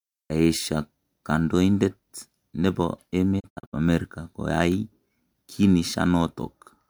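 At 3.39 s the speech breaks up in a digital broadcast dropout lasting until 3.75 s. The receiver stopped getting good frames and muted, so about 192 ms of audio is simply gone, spread as short holes over 320 ms, the longest 64 ms, which fits several lost frames of around 32 ms each. Each gap fades out over 20 ms. On a waveform the envelope drops to silence in separate notches, and a spectrogram shows blank vertical bands across all frequencies.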